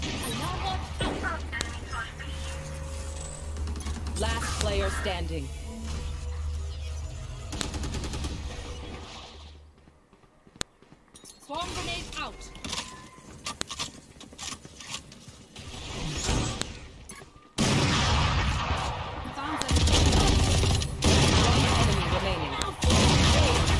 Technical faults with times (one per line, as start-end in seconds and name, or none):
1.61 file header played as audio
4.61 file header played as audio
7.61 file header played as audio
10.61 file header played as audio
13.61 file header played as audio
16.61 file header played as audio
19.62 file header played as audio
22.62 file header played as audio